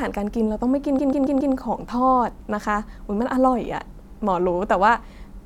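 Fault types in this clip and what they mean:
Repeated frames: a 139 ms block of the speech is played four extra times between 0.98 s and 1.53 s, lengthening it by 557 ms. Unlike an echo, each repeat is a full-level identical copy, heard as a mechanical stutter.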